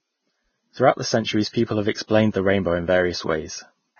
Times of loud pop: none

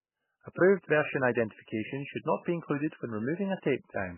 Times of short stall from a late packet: none

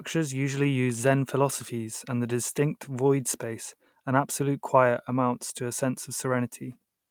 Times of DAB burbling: none

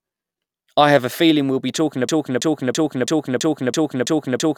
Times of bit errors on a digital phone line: none

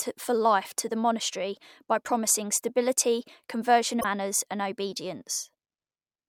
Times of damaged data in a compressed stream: 3.97-4.05

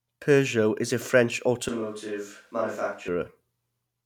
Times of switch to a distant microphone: 1.68-3.08

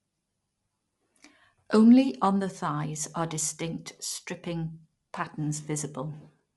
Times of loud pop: none

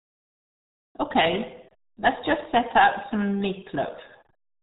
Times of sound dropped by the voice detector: none

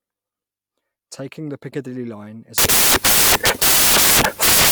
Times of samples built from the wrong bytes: 2.58-4.71

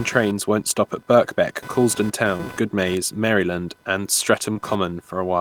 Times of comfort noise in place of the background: none

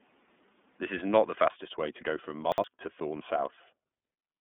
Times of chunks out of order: 2.52-2.64

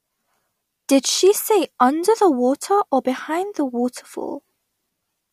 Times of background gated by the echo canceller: none

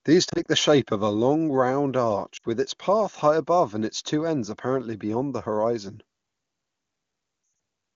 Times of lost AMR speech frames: 0.29-0.46, 2.37-2.45, 7.43-7.59

